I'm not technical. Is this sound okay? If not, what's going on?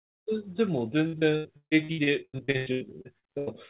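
No. From 1.07 to 3.5 s the speech turns choppy and robotic. This is repeated packet loss: bits of the call kept going missing, and the gaps, up to 0.15 s long, were patched by stretching the last sound.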